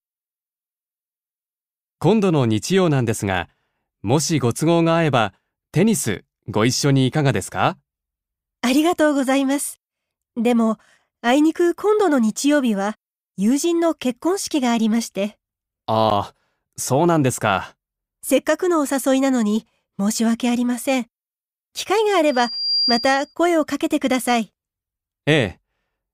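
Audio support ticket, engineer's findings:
Block of digital silence at 16.10 s. Tick, no fade in or out. About 11 ms of zeros, which fits a 512-sample buffer left unfilled in time; output buffer underrun in the playback or processing thread. Waveform: flat line near zero with hard vertical edges. Spectrogram: thin full-height click stripe at each edge around a narrow blank column.

Loudspeaker feedback squeal, 22.3 to 23.35 s. Single 4.8 kHz tone swells over roughly 0.4 s to about the level of the audio. Mic picking up its own loudspeaker; loop gain above one at that frequency. Spectrogram: one bright horizontal line at 4.8 kHz, brightening as it grows. Waveform: envelope ramping up, dense sinusoid riding on the signal.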